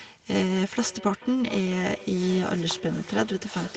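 From 0.5 s to the end, the speech carries feedback echo between two devices. A second device in the same room plays back what this microphone sent, and the microphone picks it up again, which the local echo canceller can't remove. Each phrase returns roughly 0.4 s later, thinner and ringing, at about 18 dB below the speech. On a spectrogram, which stops at 8 kHz, faint copies of each speech burst trail the originals by a constant offset, and the waveform shows low echoes filling the pauses.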